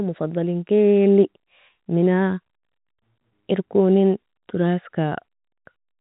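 Nothing goes wrong in this speech clip; it just has the narrow, phone-line character you'd expect from G.711 telephone coding, with the top end stopping around 4 kHz and only a faint hiss riding along under the voice.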